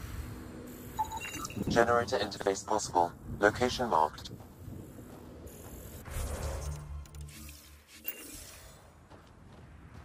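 At 1.49 to 1.67 s the sound jumbles briefly: chunks out of order. A piece about 46 ms long, which fits a 2048-sample buffer at 44.1 kHz, plays three chunks later than it should. There are three hard joins. A dropout would leave a gap, but nothing is missing here. The material is all present, just in the wrong sequence.

From 1.83 to 2.83 s the sound turns hollow and phasey. This is channel delay causing comb filtering. One channel lags by roughly 10 ms, and when the two are summed to mono, cancellations fall at evenly spaced frequencies starting near 50 Hz. Plain low-pass dulling removes the top end smoothly. This instead carves fixed, regularly spaced notches, which gives a flanged, tube-like colour that stays steady.

Inside that stretch, at 2.37 to 2.46 s, and again at 4.18 to 4.27 s, one chunk arrives a single chunk late. Each time there is a short stutter.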